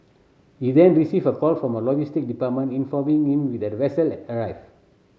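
Nothing in this speech recording stood out as a technical fault on listening.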